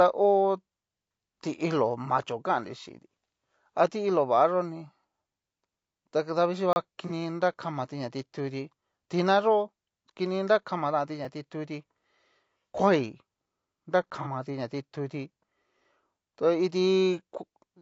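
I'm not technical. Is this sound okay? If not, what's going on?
No. The voice sounds rough and grainy throughout, with a thin, artificial top end. The likely cause is low-delay AAC compression squeezing the speech too hard, as video calls do.

There are brief dropouts: a short hole from 6.73 to 6.76 s, and ticks at 11.25 and 14.10 s. These are blocks of digital silence, most likely where the audio program didn't deliver sound in time.

At 7.07 to 7.12 s and 14.22 to 14.27 s the sound briefly smears into a noisy blur. This is AAC frame loss with concealment: a piece of data went missing and the decoder guessed to fill the gap.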